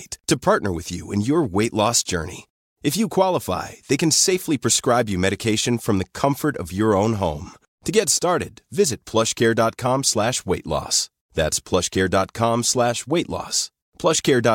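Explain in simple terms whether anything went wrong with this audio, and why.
Nothing went wrong here: no faults turn up anywhere in the recording, so there is nothing to flag or explain.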